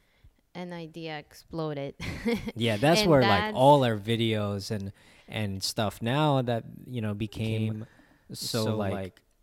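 From 7.37 s to the end, every syllable of the speech is heard twice: a second, full-band copy trails the first by roughly a tenth of a second, somewhat quieter, perhaps about 5 dB down. It carries no reverberant tail or room colour, and it cuts in abruptly rather than fading up. This is a doubled audio track, likely caused by the same signal reaching the mix a second time through a slower capture path or an edit leaving two copies out of step.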